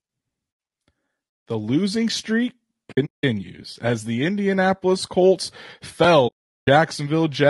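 It's a speech clip with a rough, grainy tone throughout, with noise between the harmonics, most likely low-delay AAC compression at a low bitrate somewhere around 32 kbps. There's also AAC frame loss with muting: soft-edged dropouts scattered from 2.91 to 3.24 s, the longest about a fifth of a second, then a solid hole from 6.27 to 6.68 s.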